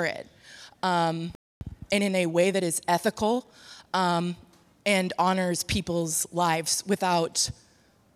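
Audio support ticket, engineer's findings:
Playback stall, 1.35 to 1.61 s: player likely starved of buffered data or its output thread blocked; output drops to silence for about 260 ms, speech cutting off mid-flow, then resuming.

Time-compressed catch-up, 1.61 to 4.19 s: player trimming the backlog left by the stall by dropping short segments and cross-fading the joins; speech runs hurried at 1.1x with pitch unchanged.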